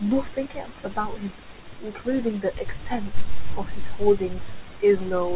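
Speech over a narrowband call path, with nothing above 4 kHz, which fits G.711. There is short concealed packet loss from 1.02 to 1.06 s. Audio went missing and the receiver filled the gap by extending the previous sound, leaving a brief smear.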